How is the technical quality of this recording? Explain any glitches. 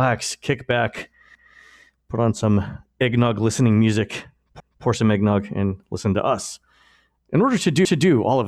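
The recording has a recurring join fault in the speech.

Overlapping chunks occur at 1.35–1.60 s (after "kick back", before "put on some eggnog"), 4.60–4.85 s (after "some eggnog listening music") and 7.85–8.10 s (after "order to"). The audio was handled in 3-second blocks, and each new block restarts 250 ms before the previous one finished. That quarter-second is therefore played twice, producing a stutter at each seam, repeating about every 3.25 seconds.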